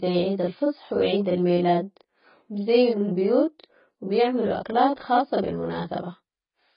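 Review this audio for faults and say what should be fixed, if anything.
Two faults run through the whole speech clip.

Channel delay (doubling) is present from start to finish. One channel arrives 40 ms after the other. When the two are summed to mono, the late copy does not blend in. It sits behind the original at the same level, so every syllable sounds doubled, like a tight slap echo. At 40 ms the gap is too long to fuse, so the copy is heard separately. To prevent it, align the channels before any mono fold-down, or check the buffer on the late path.

The audio also sounds dull and smeared throughout. Nothing is heard above 5 kHz, so consonant detail and air are gone. Sustained vowels warble, and sibilants turn fizzy and watery. The damage is heavy. This is likely AAC compression at a very low rate, which fits a bitrate of around 16 kbps. At that rate the encoder lowers its cut-off and leaves gaps in the spectrum. 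To prevent it, encode speech at a higher bitrate or keep an uncompressed master.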